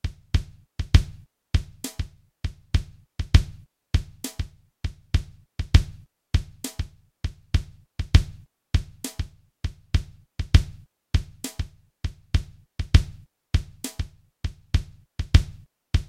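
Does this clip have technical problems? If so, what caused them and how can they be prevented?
No, the sounds in this clip come through with no audible technical faults anywhere in the signal.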